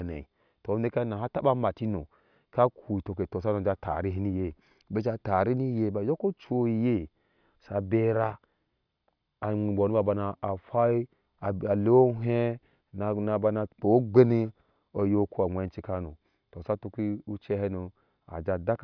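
No technical faults can be heard anywhere in the recording; the signal stays continuous and intact throughout.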